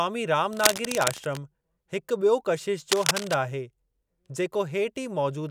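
Cable scratch noise appears twice in this speech recording, from 0.53 to 1.37 s and again from 2.92 to 3.34 s. Both bursts are dense, ragged scratching laid over the speech. The first sits a few decibels below the speech, and the second is roughly as loud as the speech itself. The likely cause is a worn cable, connector or control being moved, so that its contact resistance jumps around and injects irregular noise into the signal.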